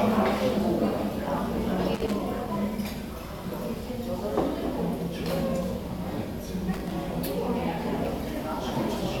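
At 1.95 s a burst of loose connector crackle starts and runs to 2.19 s. It returns from 6.74 s to 6.91 s. Each burst is a rough, irregular scratching laid over the sound. A worn or dirty contact is making and breaking as the cable moves. That chops the signal on and off in quick, uneven steps. Any DC on the line adds pops at the breaks.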